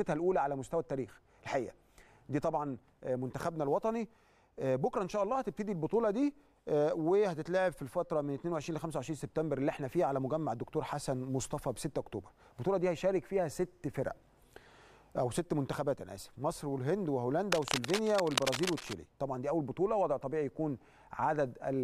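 From 17.52 to 18.94 s, cable scratch noise appears. Dense, uneven scratching sits just below the sound's level, likely from a worn cable or connector being moved.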